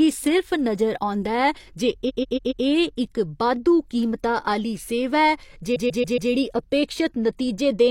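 At 2.05 s and again at 5.72 s, the speech stutters from repeated frames. A 139.3 ms block plays four extra times, which fits three compressed frames being resent. Each stutter runs about 0.56 s and lengthens the audio by 557.3 ms.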